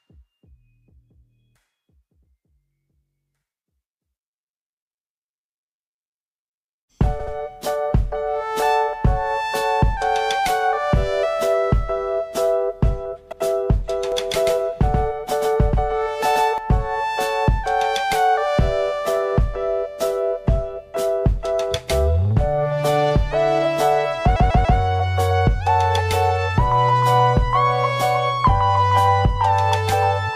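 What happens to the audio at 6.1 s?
Nothing goes wrong at 6.1 s: the audio plays through that moment intact, with no dropout, click or distortion.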